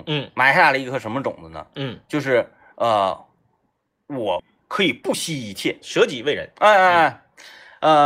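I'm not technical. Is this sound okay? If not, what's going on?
No. At 4.39 s there's a skip ahead: about a second and a half of the speech is missing, and playback jumps straight to later speech with no gap. This happens when a delayed batch of sound is thrown away because newer sound is already waiting. Unlike a dropout, you don't hear silence or a hiccup filling the hole. The two sides are simply stitched together, so part of what was said just vanishes.

From 4.87 to 5.53 s there's a jitter buffer speed-up. The system had built up too much waiting sound, so to catch up it repeatedly snipped out tiny slivers, about a tenth of a second in total. The speech plays roughly 16 percent faster and sounds rushed. Unlike a tape played fast, the voice doesn't go higher or squeaky: the pitch stays the same and only the pace changes.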